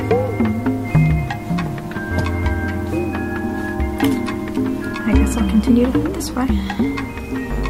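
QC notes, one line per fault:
No faults to note, so there is no line per fault to give.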